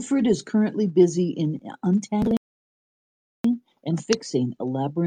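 At 2.37 s the speech drops into dead silence and stays there until 3.44 s, then carries on from precisely the point where it broke off, with nothing skipped or repeated. That is a rebuffering stall: playback consumed all the downloaded audio and had to pause until more data came in. No material is lost, but the gap inserts about 1.08 s of silence into the clip.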